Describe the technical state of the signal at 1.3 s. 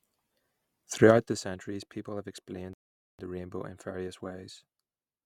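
At 1.3 s the signal carries zipper noise, running from 1.07 to 1.45 s, just before "people have explained the". The speech level drops by roughly 15 dB in unsmoothed 3 dB steps, about fifteen per second, and each jump leaves a small click, heard as a ticking texture.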